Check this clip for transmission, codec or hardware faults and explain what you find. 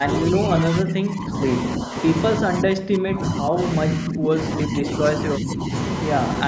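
The speech in this clip is repeatedly turned down in four stretches: 0.0 to 1.4 s, 1.78 to 2.03 s, 2.46 to 4.88 s, and 5.37 to 5.71 s. This is speech suppressed in double talk, likely from an echo canceller that could not tell the near talker from loudspeaker echo while both sides spoke, so it attenuated everything. The voice dips by around 10 to 20 dB, deepest in the long middle stretch, and goes thin or patchy there. The call microphone processing leaves no content above 8 kHz, as expected for a call path.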